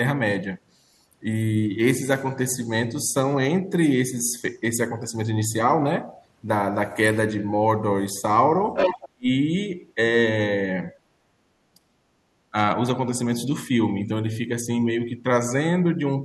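From 8.74 to 9.09 s a second voice comes through at roughly the same loudness as the main speech. This is the other side's voice leaking through: the far end was playing on a loudspeaker, and the echo canceller likely failed to strip that sound from the microphone signal. Unlike background talkers in the room, the leaked voice is the far end's sound that has passed through a loudspeaker and back into the microphone.

Right after that, from 9.13 to 9.28 s, the main speech is almost wiped out, falling close to silence for about 150 ms. At 11.75 to 11.8 s it dips again, more mildly and for only about 50 ms. Both are speech suppressed in double talk. With both sides talking at once, the echo canceller likely could not tell the near talker from the echo and turned everything down. Packet-loss dropouts cut in abruptly, with no link to other sound. These dips follow the overlap with the other side.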